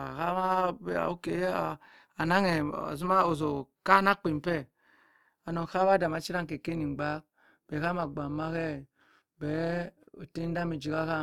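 Throughout the speech there is overlap-add ripple. The frames were rejoined with overlaps that do not sum to a constant gain, so the level dips by about 6 dB once per frame, at around 200 Hz. Unlike comb filtering's hollow tonal colouring, this is amplitude modulation, heard as a buzzy, robotic roughness.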